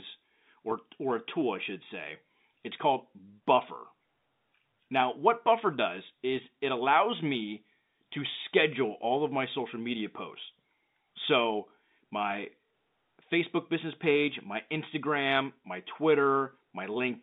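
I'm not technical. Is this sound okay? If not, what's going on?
Yes, it's fine: it's just speech coming over an ordinary phone line, so it has that familiar narrow telephone sound, and nothing's going wrong in it.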